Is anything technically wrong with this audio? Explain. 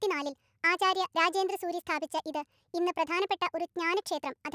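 Yes. Throughout the speech runs at a wrong sample rate, sped up 1.45 times and raised about 6.5 semitones, which fits 22 kHz audio played at 32 kHz. Unlike a pitch shift, tempo and pitch rise together.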